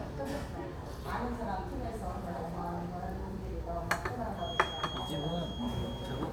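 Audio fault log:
4.33–6.32 s, feedback whistle: A thin, steady tone at 3.3 kHz sits behind the sound until the end, about 10 dB below it, swelling and fading slowly in level. The loudspeaker-to-microphone loop is likely held right at the edge of feedback, sustaining that frequency without building further.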